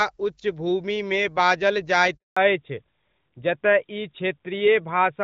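Speech carried over a phone call is briefly broken by a handover gap from 2.17 to 2.37 s, where the network switch delivered no frames. The voice dies away within a few tens of milliseconds and leaves 200 ms of silence, seen as a flat waveform and a blank vertical strip on a spectrogram. From 2.37 s to the end comes a fallback to narrowband: the call leaves HD Voice, in a way that fits AMR-WB around 12.65 kbit/s dropping to AMR-NB around 12.2 kbit/s. Everything above 4 kHz disappears, so a spectrogram shows a hard horizontal ceiling at 4 kHz, and the speech turns duller and rougher.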